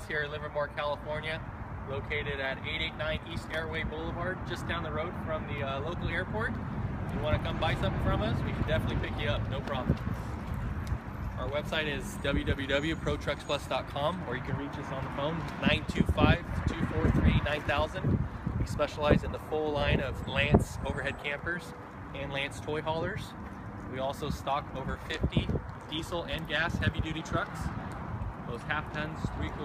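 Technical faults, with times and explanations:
No technical faults detected.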